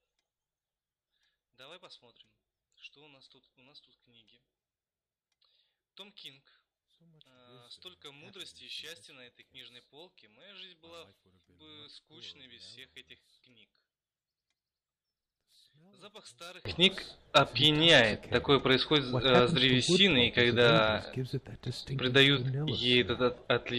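From 0.0 to 16.65 s, one channel likely has inverted polarity, so shared content cancels in mono, dropping the sound about 26 dB to a faint difference signal.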